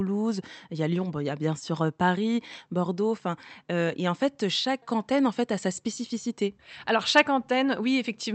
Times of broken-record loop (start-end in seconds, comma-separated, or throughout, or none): none